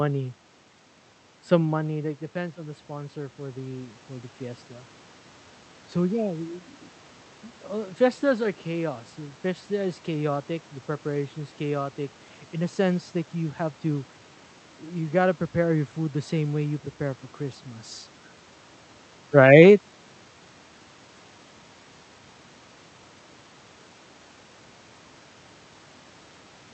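From 1.82 to 4.43 s the voice and the room noise behind it swell together, climbing about 6 dB over more than two seconds. This is automatic gain rising: after the talker moved away near 1.5 s and the input dropped about 14 dB, the gain control slowly lifted its level to compensate.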